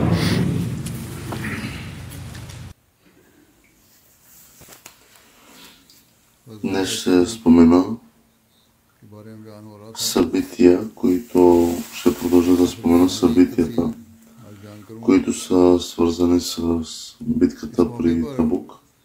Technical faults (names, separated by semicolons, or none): loose connector crackle